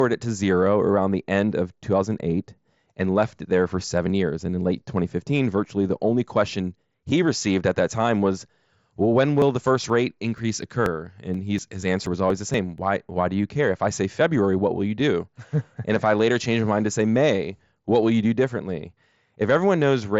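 Speech carried over a Bluetooth mSBC headset link, band-limited to about 7.7 kHz, breaks up with periodic USB or driver dropouts from 9.42 to 12.78 s, just after "time was well when". Every 0.24 s, roughly 10 milliseconds of audio is skipped rather than filled with silence, around fifteen times, giving evenly spaced ticks while speech continues. That strict regularity points to a recurring system task stalling the bus or driver, not to random wireless packet loss.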